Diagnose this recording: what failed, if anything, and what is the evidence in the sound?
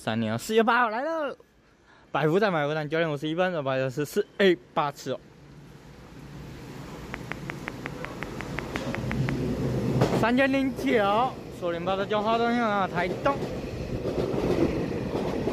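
Train of clicks, 7.14 to 9.30 s: about fifteen near-identical pulses at a regular 5.6 per second, far louder than the sound, likely from interference in the analogue wiring.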